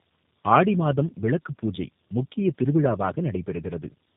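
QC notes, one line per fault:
throughout: tandem speech coding, likely AMR-NB then G.729A; the second coder compounds the first's errors, giving rough, muffled, warbly speech with nothing above 3.8 kHz.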